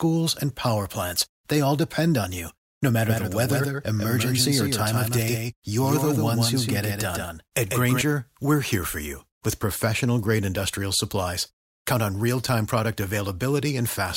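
A speech recording carries a doubled audio track from 3.09 s to 8.01 s, ending just before "we're here for you". A full-band copy trails the original by about 150 ms at roughly 5 dB lower, with no reverberant tail, and it cuts in and out abruptly. It is likely a second capture through a slower path. On a spectrogram, every harmonic stack and onset repeats slightly fainter about 150 ms later, and the waveform shows matching echo bursts.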